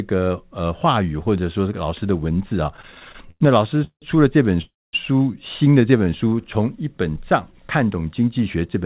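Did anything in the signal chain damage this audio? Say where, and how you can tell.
Yes. Repeated stalls (stutter) run from 2.74 to 4.04 s, a network and jitter-buffer fault. The sound halts and restarts fifteen times, with the longest hold about 173 ms, and roughly a third of that stretch is filled-in continuation rather than fresh audio. Packets were arriving late or slower than playback, so the buffer kept draining and the receiver stretched the last sound each time, then resumed with nothing lost, leaving the audio dragging and stuttering.

A call audio freeze follows at 4.62 to 4.95 s. The sound hangs for about 314 ms, a brief stretched tail of the last sound fading into around 230 ms of silence, then picks up exactly where it stopped. That pattern is likely packets held up in the network until the jitter buffer ran dry. The wait inserts a gap and pushes everything after it later by that amount, without dropping any content.

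A jitter buffer slow-down runs from 5.82 to 6.46 s. Over that span the audio plays at about 88 percent speed while its pitch stays put, drawing sounds out by around 89 ms in total. Pitch staying constant is the giveaway. The receiver was rebuilding its reserve by repeating single pitch periods and slivers of pause many times over, rather than resampling, so the timing stretches without the tone dropping.

A jitter buffer speed-up closes the clip, from 8.38 to 8.85 s, where the audio runs at about 108 percent speed at unchanged pitch and sounds hurried. The buffer was holding more than its target, so the receiver trimmed short pieces of one or a few pitch periods, about 50 ms altogether, to pull the delay back down. All of this sits on a narrowband call path with nothing above 4 kHz, which fits G.711 mu-law.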